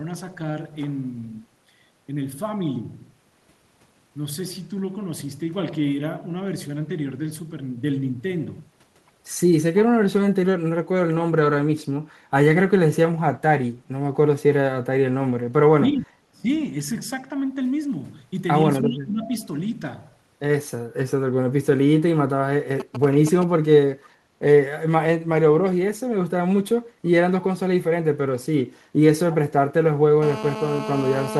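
A speech recording with four kinds of fault. At 10.82–11.06 s, 15.72–16.46 s and 18.9–19.31 s the voice sinks by roughly 15, 25 and 20 dB. This is likely speech suppressed in double talk, where an echo canceller turns down its own talker while the far side is speaking. A waveform shows notched envelope dips. From 22.8 to 23.44 s, GSM signalling bursts add a galloping run of short buzzes at a 217 Hz rate, about 10 dB below the speech. A nearby 2G phone sends these short groups of radio bursts before a call or text, and the audio circuitry rectifies them. On a spectrogram they appear as clustered vertical stripes. At 24.04–24.09 s a faint copy of earlier speech, delayed by 323 ms and about 35 dB down, pokes through. That is likely an echo leak from a far-end loudspeaker the canceller didn't fully remove. It shows as a faint smear repeating a formant pattern from a third of a second before. 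From 30.22 s to the end, a GSM phone buzz sits about 11 dB below the signal. It is a hard, raspy 217 Hz tone, drawn as evenly spaced horizontal harmonic lines unrelated to the voice.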